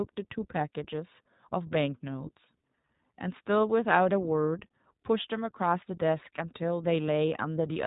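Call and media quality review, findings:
iLBC codec, whole clip. Speech band-limited, nothing above 3.8 kHz. Plainly audible roughness, synthetic texture. Each frame's excitation coded independently, so no smoothing across frames. Artefact character fits iLBC's 20 ms frame mode, around 15 kbps. Narrowband VoIP leg suspected.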